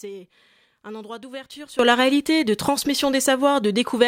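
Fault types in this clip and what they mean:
Sudden gain jump: right after "un endroit d'ouverture", at about 1.79 s, the level of the speech leaps up by about 18 dB in one step and stays there to the end of the clip. The background noise comes up by the same amount, so the whole signal was scaled at once rather than the talker moving closer. The likely cause is a digital gain change applied instantly, with no fade between the old and new settings.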